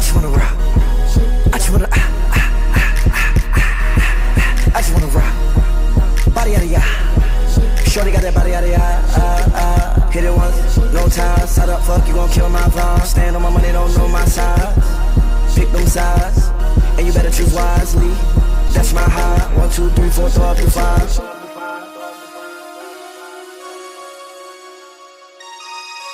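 At 18.68 to 18.70 s, a short concealed packet loss: audio arrived too late, so the receiver extended the preceding sound, leaving a brief smear or wobble.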